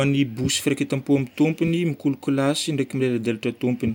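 No technical faults can be heard anywhere in the recording; the speech signal stays continuous and stable throughout.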